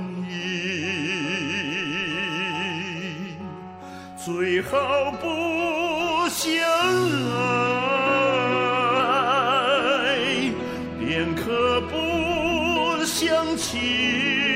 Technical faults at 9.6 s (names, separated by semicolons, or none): drift correction step